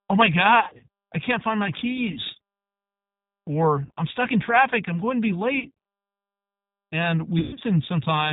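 Throughout, a G.729 codec at plainly audible strength leaves a rough, synthetic edge, consistent with an 8 kbit/s stream. On a spectrogram, energy stops at a hard 4 kHz ceiling, and the harmonics look smeared and grainy.

VoIP packet loss concealed by the speech codec strikes at 0.60–0.84 s (about 160 ms lost, longest gap 70 ms), at 2.12–2.20 s after "I can't find my", at 3.85–3.91 s before "I'm stuck in traffic", at 5.60–5.72 s after "I'm going to be", and at 7.39–7.64 s (longest gap 120 ms). Each time, the decoder stretches the last sound into a fading buzzy tone or coloured noise, seen as a shrinking waveform envelope.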